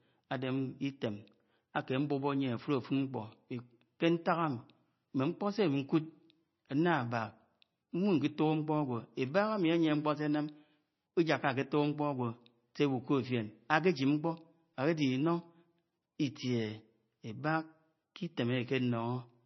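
Speech, with heavy MP3 compression damage across the whole clip. Nothing is present above about 5.9 kHz, so sibilants sound dull and clipped, and the remaining spectrum has a watery, swirling quality where weak frequency lines drop in and out between frames. Consonant attacks are smeared. The fixed treble cut and this level of artefacting point to a low bitrate, likely a roughly 25 kbps MP3 encode.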